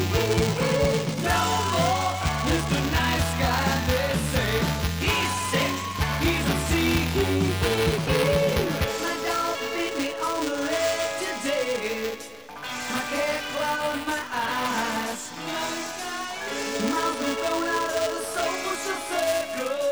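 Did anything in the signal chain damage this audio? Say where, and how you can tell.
Yes. Buffer tearing runs through the whole clip, at the driver and buffer stage. A steady robotic buzz at 375 Hz rides on the sound and is present only while there is signal. That rate fits a 128-sample buffer. The application writing the ring buffer and the hardware reading it have drifted into overlap. In every period a small slice, only a few percent, carries audio from about 5 ms earlier, with hard joins at both edges.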